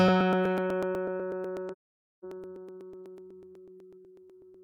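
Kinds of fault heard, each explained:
Periodic USB or driver dropouts: A background task stalls the audio path at a fixed interval, and a sliver of about a millisecond is skipped each time. Here this repeats every 0.124 s from 0.08 to 4.54 s, giving roughly forty evenly spaced ticks heard against the signal.
AAC frame loss with muting: The decoder zeroed the spectrum of lost frames, so the overlapping windows fade the sound out and back in. From 1.72 to 2.25 s a 512 ms hole opens with soft edges, which fits a run of twelve dropped frames.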